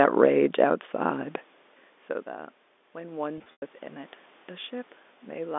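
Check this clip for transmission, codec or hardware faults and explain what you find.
Two faults stand out, and they overlap in the second half of the clip.

From 2.26 to 4.19 s there is automatic gain rising. The input level fell by about 20 dB, so the automatic gain control judged the signal too quiet and slowly pushed its gain up by about 4 dB over nearly two seconds. Because the gain acts on everything the microphone picks up, the speech and the room noise behind it swell together as a gradual lift, not a sudden jump.

From 3.38 to 3.62 s there is packet loss with pitch repetition. About 140 ms of audio went missing, scattered across a 240 ms stretch, with the longest gap lasting 100 ms. To bridge each hole, the receiver kept repeating the last pitch period and let it fade. The shorter gaps come across as a briefly held, buzzy tone. The 100 ms run lasts long enough to fade towards silence before the speech cross-fades back in.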